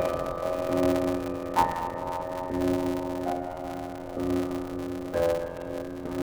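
A block size mismatch (padded) runs through the whole clip. Short silent gaps recur at a steady 86.1 Hz, giving a constant buzz, and the audio plays at 0.625 times normal speed while keeping about its usual pitch. That points to one stage writing 320-sample blocks into a stage reading 512, with zeros filling each remainder, which fits a 512-sample buffer. A sample-rate error would lower the pitch along with the speed, and random dropouts would not buzz at a fixed rate.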